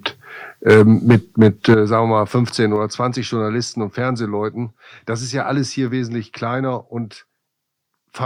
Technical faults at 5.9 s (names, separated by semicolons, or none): microphone volume stepped down